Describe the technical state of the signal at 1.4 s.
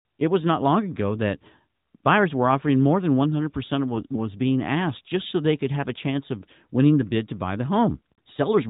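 At 1.4 s the speech is intact with no fault, carrying only the band-limited, lightly coded sound of the working AMR narrowband mobile codec path, which fits its highest-quality 12.2 kbps mode.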